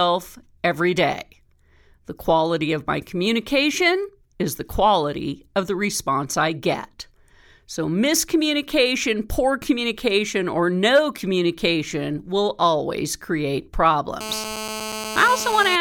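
GSM phone buzz runs from 14.21 to 15.76 s in this speech clip, right after "communication will always create". A nearby 2G phone on a call transmits bursts at 216.7 Hz. The audio circuitry rectifies those pulses into a steady, harsh, harmonic-rich rasp about 9 dB below the signal.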